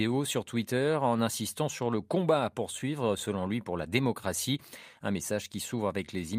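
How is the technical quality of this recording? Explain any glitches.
The speech is marred by timing faults that run through nearly the whole recording.

Clock drift between sender and receiver is present throughout. The sender's audio clock runs about 1% slow relative to the receiver's, so the jitter buffer keeps draining and the receiver must fill the shortfall, leaving the timing slightly uneven.

Repeated timing corrections occur from 0.08 s to 6.06 s. To keep pace with the slower sender, the receiver repeatedly repeats short pieces, adding roughly 70 ms in total and playing at 99% speed. They are heard as small, irregularly spaced hiccups and a faintly unsteady tempo.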